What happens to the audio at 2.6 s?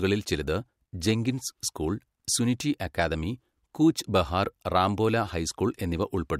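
Nothing goes wrong at 2.6 s; the speech runs through that moment intact, with no dropout, click, glitch or other fault.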